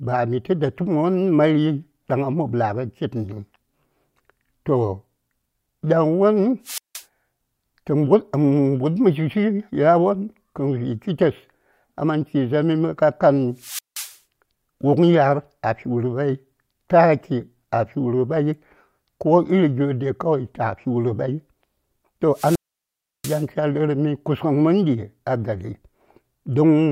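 Wireless microphone squelch dropouts occur at 6.64–7.04 s, 13.56–14.18 s and 22.33–23.47 s. Each time the radio link fades, hiss swells, and the receiver's squelch mutes the speech for about 173 ms, 177 ms and then a much longer 690 ms.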